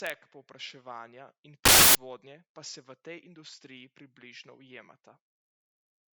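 Samples built from the wrong bytes break into this speech clip from 1.65 to 1.95 s, a burst of loud, harsh broadband noise lasting about 0.3 s. For that stretch the bytes making up each sample were assembled wrongly, whether shifted by a byte, swapped in order or read on the wrong alignment, so the rapidly fluctuating low-order bits landed in the most significant position. The result swamps the signal with loud broadband noise.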